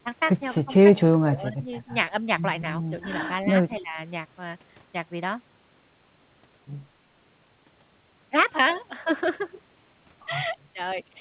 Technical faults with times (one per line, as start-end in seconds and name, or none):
0.65-0.86 speech suppressed in double talk
1.19-1.70 speech suppressed in double talk
3.79-3.99 speech suppressed in double talk
10.62-10.68 echo leak